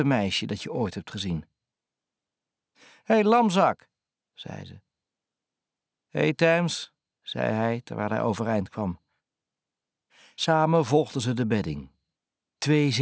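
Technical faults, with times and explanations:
throughout, aliasing: unfiltered downsampling folds highs above 8 kHz back as gritty false tones about 25 dB down; spectrogram: mirrored energy hard against 8 kHz.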